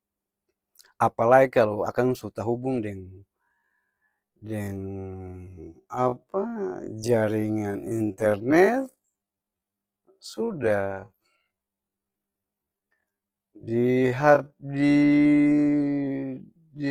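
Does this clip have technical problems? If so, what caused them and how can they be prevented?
Yes. Throughout the speech there is a rough, grainy texture on voiced sounds, with the upper frequencies kept but sounding noisy rather than clean. This is Opus compression, likely from encoding in its music (CELT) mode at a low rate, which fits roughly 24 kbps. When bits run short, that mode fills bands with folded or noise-like energy instead of leaving gaps, so the detail turns coarse. Encoding speech at a higher bitrate, or letting the encoder use its speech mode, would prevent this.

From 3.38 s, right after "akang su tahubung deng", to the end of the clip, the pace abruptly drops to roughly half speed while the pitch stays the same. This time-stretched section likely comes from software slowing the audio by about 0.51 times and preserving pitch by repeating short slices. Checking that any stretching or length-fitting step is applied at a speed factor of 1.0, or skipped, would prevent it.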